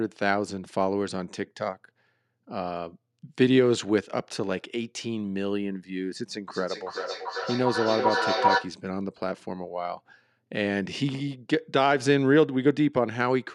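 From 6.5 to 8.79 s, feedback howl builds near 1 kHz, pulsing roughly every 400 ms, as a microphone-loudspeaker loop gains level each pass, peaking about level with the speech.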